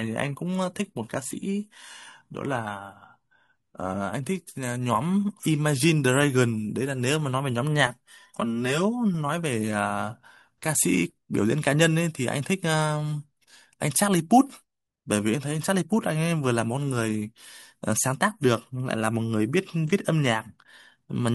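From 0 to 4.0 s the speech has the character of an adaptive stream starting at a low bitrate. The treble sounds synthetic and codec artefacts are prominent, consistent with an HE-AAC rendition near 20 kbit/s. At 4.0 s quality jumps without a gap, as expected from a step up to roughly 96 kbit/s AAC-LC.

Between 7.87 and 9.14 s the speech turns hollow and phasey. This is channel delay (comb filtering): one channel lags by roughly 5 ms and the mono sum cancels at evenly spaced frequencies, with the first notch around 100 Hz.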